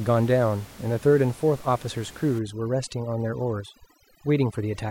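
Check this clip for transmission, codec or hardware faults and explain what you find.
One processing fault appears, in the second half of this speech clip. Room noise sits about 22 dB below the speech before it starts. From 2.39 s to the end, there is overdone noise removal. A noise reduction stage set too hard pulls down any frequency band close to its noise estimate. Soft speech detail goes too. The background drops and breaks up into twinkling specks.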